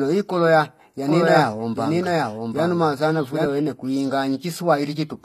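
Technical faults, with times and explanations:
throughout: HE-AAC compression. The codec damage is plainly audible. Nothing survives above 14.9 kHz. The upper band sounds rebuilt rather than recorded, and that points to HE-AAC, likely at a bitrate around 24 kbps. This codec keeps only the lower spectrum and fills the treble by copying lower bands upward under a coarse envelope. The copied harmonics do not line up with the real ones. S sounds therefore turn gritty, metallic or lispy.
1.06 to 3.46 s: doubled audio track. Just after "i kola ya", a second copy of the speech joins the first. It trails by about 0.7 s and is roughly as loud as the original. It is full-band, with no decay or room colour, so it reads as the same audio again, not an echo. It begins and ends abruptly. The likely cause is a second, slower capture path, or an edit holding two copies out of step.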